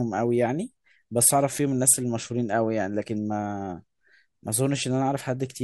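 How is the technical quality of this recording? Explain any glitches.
The technical quality of the recording shows no glitches to explain.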